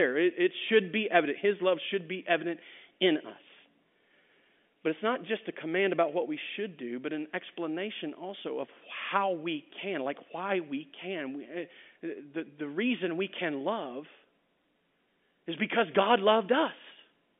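Speech over a telephone line, with no technical faults.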